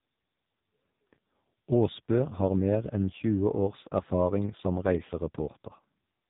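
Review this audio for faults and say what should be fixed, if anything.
Heavy AMR narrowband mobile codec damage runs throughout: speech is capped at 4 kHz and sounds buzzy and synthetic, fitting a low mode near 5.9 kbps, unlike a plain band-limit filter. Prevent it by capturing or transmitting over a wideband or higher-bitrate path instead of a narrowband mobile codec.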